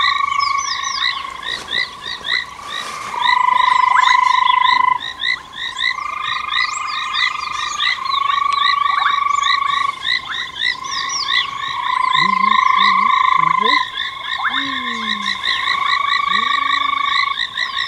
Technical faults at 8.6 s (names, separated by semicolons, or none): none